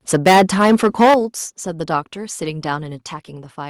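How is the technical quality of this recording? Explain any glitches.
The technical quality is poor at the start. Two related faults are audible.

From 0.13 to 1.15 s there is microphone overload. The peaks are flattened and the loudest syllables crackle harshly. The input was likely set too high, driving peaks about 11 dB past the converter's limit. Roughly a sixth of the samples are cut off.

At 1.14 s the microphone volume steps down. The speech and the background both drop by about 10 dB at once. The call software likely detected the clipping and cut the device's input gain in a single step. That step ends the distortion.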